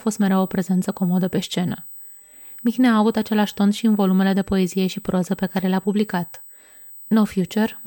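Throughout the speech runs a USB whine, a fixed high tone at 8 kHz with its strongest component at 16 kHz, roughly 20 dB below the speech. USB microframe current leaks through power or ground. A spectrogram shows steady horizontal lines at both frequencies across the clip.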